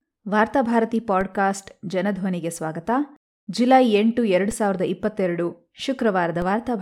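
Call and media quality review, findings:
DC step at 1.21 s, 4.51 s and 6.42 s: low thumps as the waveform's zero line jumps, about -22, -22 and -20 dBFS. Offset then drains away through a roughly 20 Hz high-pass. Speech continues unaffected. Probable converter recalibration or offset input switching.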